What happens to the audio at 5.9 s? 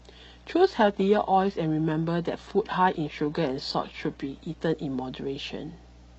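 At 5.9 s the speech carries mains hum, a steady 60 Hz tone that runs through the whole recording rather than starting or stopping there. Power-line current is leaking into the signal path, most plausibly through a ground loop or stray field from a nearby transformer. The result is a constant low drone with a few low harmonics, sitting roughly 25 dB below the speech.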